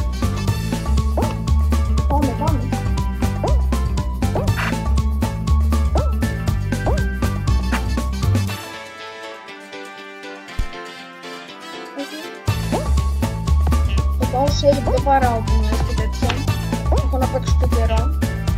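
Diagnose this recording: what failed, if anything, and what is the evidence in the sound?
Nothing failed, and the sound gives no evidence of any fault.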